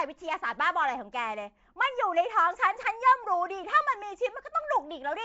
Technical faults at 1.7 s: Nellymoser compression

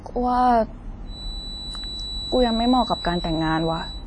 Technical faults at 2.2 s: WMA compression; feedback whistle

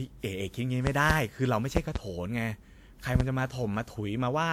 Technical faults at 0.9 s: generation loss; loud pop

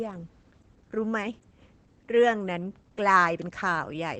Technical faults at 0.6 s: Opus voice compression

